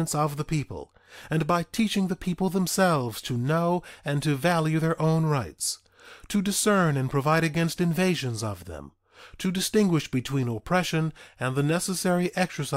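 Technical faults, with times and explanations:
Nothing here calls for a note, since no technical faults turn up anywhere in the clip.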